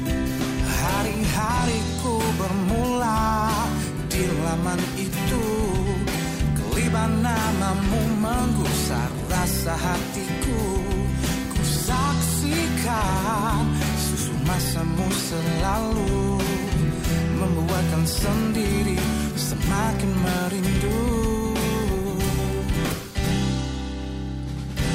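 Nothing here calls for comment, since no technical faults turn up anywhere in the recording.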